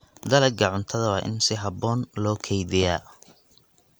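Speech recording, and nothing is technically wrong with it.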